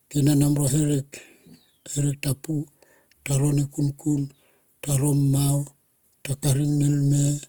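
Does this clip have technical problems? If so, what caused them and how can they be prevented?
Yes. Opus compression runs throughout, and the speech sounds plainly rough and grainy. When bits run short, the encoder fills bands with folded or noise-like content instead of leaving gaps. The pattern points to the music (CELT) mode, with a likely bitrate near 24 kbps, while the audio still extends to about 20.4 kHz. Encoding at a higher Opus bitrate would prevent this damage.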